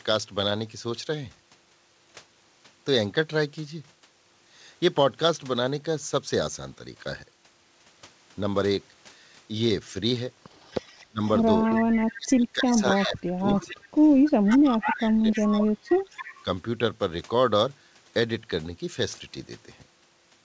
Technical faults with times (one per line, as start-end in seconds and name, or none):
10.57-12.17 echo leak
11.06-13.85 speech suppressed in double talk
12.73-15.45 echo leak
14.44-16.45 speech suppressed in double talk
16.16-16.37 echo leak